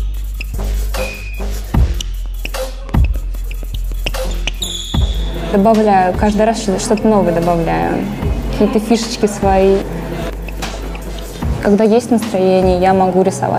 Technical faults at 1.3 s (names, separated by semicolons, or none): none